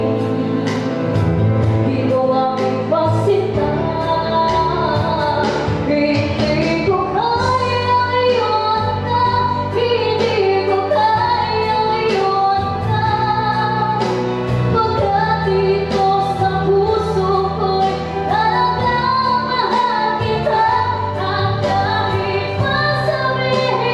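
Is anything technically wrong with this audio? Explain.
No, nothing technically wrong can be heard in this audio. No point in the clip stands out as faulty to the ear.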